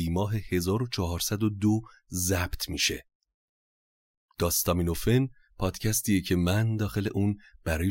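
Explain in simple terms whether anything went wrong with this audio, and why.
Faint, regular ticks run through the speech from 0.43 s to 7.88 s, around twenty of them, about every third of a second. These are clock slip clicks, likely from two devices running on slightly mismatched clocks, so a single sample gets dropped or repeated each time.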